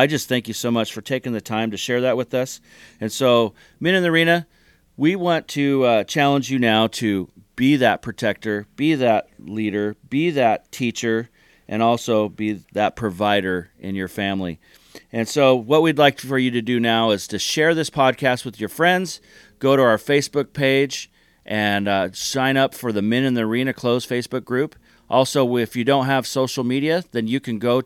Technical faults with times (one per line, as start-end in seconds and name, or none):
none